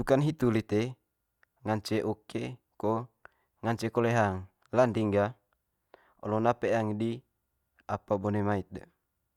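No technical faults can be heard anywhere in the speech recording, and the signal stays intact throughout.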